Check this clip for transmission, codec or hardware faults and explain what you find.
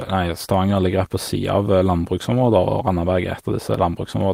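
No faults are audible anywhere in this speech recording.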